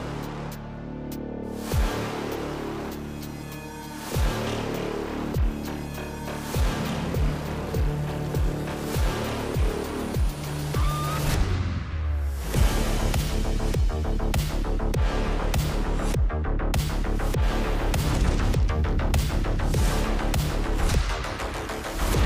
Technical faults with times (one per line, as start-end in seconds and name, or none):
none